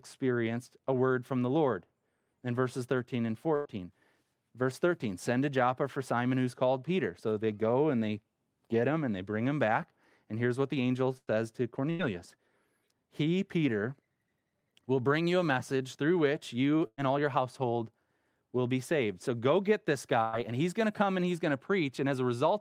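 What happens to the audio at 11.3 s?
Right after "here's what the angel", from 11.18 to 11.30 s, the last sound is briefly held and fades, and then the speech jumps ahead. This is a burst of packet loss: about 96 ms was filled by stretching the last sound, and 60 ms of speech is missing.

From 11.34 to 13.68 s the speech runs slightly fast, at about 102% speed with unchanged pitch. This is a jitter buffer speed-up, in which the receiver trimmed roughly 70 ms in short pitch-period pieces to recover the added delay.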